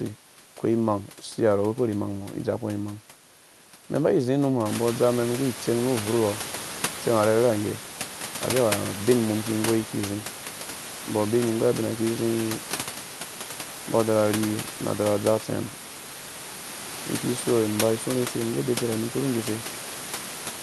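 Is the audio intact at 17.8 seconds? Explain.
Yes, the audio is intact at 17.8 seconds, with no dropout, glitch or other fault at that moment.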